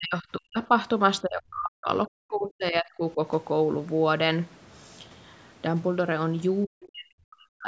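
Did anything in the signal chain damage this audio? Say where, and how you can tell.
Yes, at the call-processing stage: the speech is repeatedly pushed down by about 40 dB from 0.0 to 0.7 s, 1.22 to 1.89 s, 2.07 to 3.2 s and 6.66 s to the end. This is speech suppressed in double talk, likely from an echo canceller mistaking near-end speech for loudspeaker echo and attenuating it. Packet loss would cut to silence in short chunks. These dips are long, uneven ducks spanning half a second to a second.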